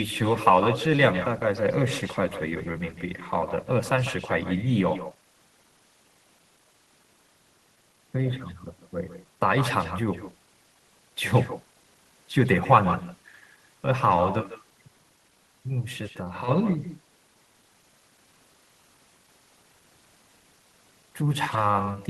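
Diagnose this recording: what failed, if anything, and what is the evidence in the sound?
Call processing failed: there is echo with no canceller. Throughout the speech, each phrase returns as a quieter, thinner copy, sitting about 11 dB below the talker. The copy lags by roughly 150 ms. The far end is playing the call through a loudspeaker. Its microphone picks that sound up and sends it straight back. No echo canceller subtracts it, so the network round trip sets the delay.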